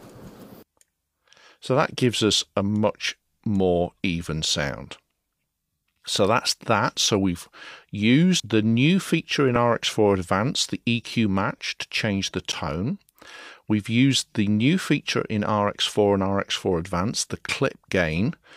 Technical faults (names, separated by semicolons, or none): damaged data in a compressed stream